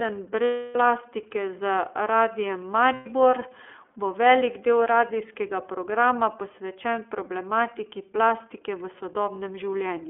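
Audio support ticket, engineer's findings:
iLBC codec, whole clip: speech band-limited to roughly 300 Hz to 3.4 kHz, nothing on top, plainly rough and a bit synthetic. Frame-by-frame excitation coding, no carry-over between frames; the character fits the 13.33 kbps, 30 ms frame mode.

Lost iLBC frames, 0.46 to 0.76 s (300 ms, fits ten dropped 30 ms frames) and 2.94 to 3.09 s (120 ms, about four frames): held buzzy-breathy vowel fill. The decoder repeats the last pitch cycle plus noise, fading on the longer gap, and recovers almost instantly since frames stand alone.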